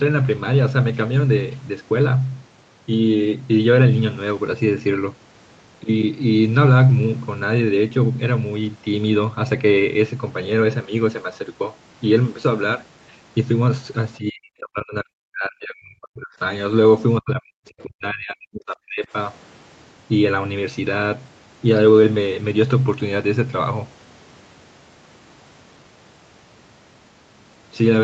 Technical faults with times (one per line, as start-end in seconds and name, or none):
14.17-16.34 speech suppressed in double talk
17.21-19.09 speech suppressed in double talk